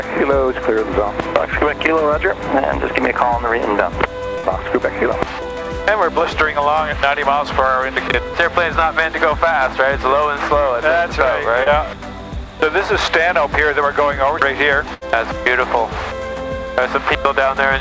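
At 4.38 to 4.45 s a burst of packet loss left a hole that the receiver filled for about 56 ms by extending the last sound and fading it. The audio then jumps ahead, with about 60 ms missing. At 11.63 to 11.68 s a short concealed packet loss covers about 20 ms of missing audio with a 24 ms synthesized fill, heard as a brief smear before the real sound returns. At 14.94 to 15.03 s a longer burst stretches the fill to about 73 ms and drops about 80 ms. Throughout, nothing sits above 8 kHz, which fits a wideband call codec such as G.722.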